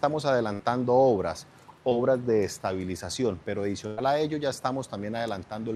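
At 0.53 to 0.61 s a burst of packet loss drops about 60 ms of audio. The receiver bridges the hole with roughly 60 ms of the last sound, stretched out and fading, so it comes across as a brief held tone or hiss before the audio jumps ahead. On a spectrogram the spectrum runs flat and unchanging, then breaks off at a clean vertical seam.

At 1.89 to 1.93 s a short concealed packet loss swallows about 20 ms. The decoder patches it with about 15 ms continued from the preceding sound and blends back in, leaving a quick smear or wobble. On the waveform there is a slight kink or envelope dip; on a spectrogram, a thin blurred column.

At 3.87 to 3.99 s a second burst of packet loss removes about 100 ms, filled with roughly 100 ms of decaying continuation and no silence. It is longer than the first: a held buzz or hiss that dims, then a skip. The spectrogram shows a frozen, darkening band ending in an abrupt join.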